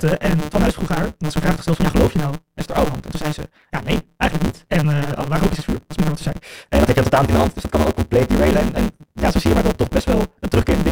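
It's a speech recording with a block size mismatch (truncated) running the whole way through: a steady buzz at about 150 Hz and speech hurried along roughly 1.6 times fast at near-normal pitch, which fits 512-sample blocks being cut short, their tails dropped at every handoff.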